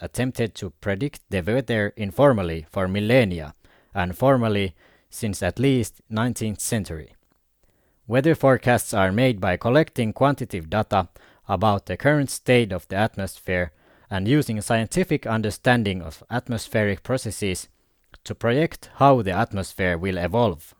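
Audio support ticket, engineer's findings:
No faults found in the speech recording. Nothing to escalate on this ticket.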